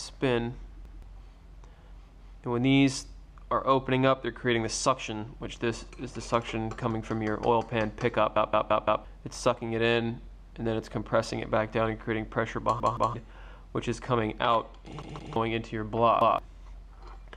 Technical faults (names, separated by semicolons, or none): repeated buffer